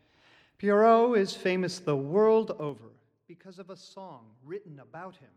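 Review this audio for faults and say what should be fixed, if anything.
Between 2.51 and 2.97 s there's zipper noise. The level drops by roughly 15 dB in hard 3 dB steps, about ten per second, instead of gliding down smoothly. Each jump lands as a tiny click, so you get a short ticking rattle riding on the sound for that half second. That points to a gain control updating in coarse increments with no smoothing in between. To prevent it, ramp the gain per sample, or interpolate across each block, so the level moves continuously.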